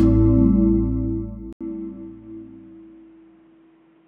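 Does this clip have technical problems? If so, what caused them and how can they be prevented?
Yes. From 1.53 s to the end, the input has likely switched to a poorer device. An 80 ms silence marks the switch, and then the sound turns dull and boxy because nothing above 3.8 kHz survives. The new input also brings a faint background noise of its own and a small shift in level. A narrower band, a different noise floor and a level step all arriving at one instant are what a device change produces, not any change in the source. To prevent it, lock the recording input to one fixed microphone and disable automatic device switching and headset call profiles before recording.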